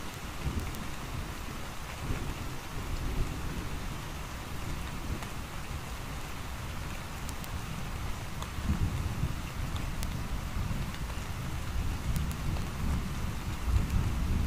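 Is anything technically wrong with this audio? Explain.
Yes. From 0.14 s to 14.45 s there are word clock ticks, around a hundred in all, recurring roughly every 0.15 s. The receiving device is running on its own clock, not locked to the sender, with a mismatch on the order of 150 ppm. Each time the two clocks drift a full sample apart, a single sample is dropped or repeated and its neighbours are misread. The result is a steady train of sharp clicks of uneven strength.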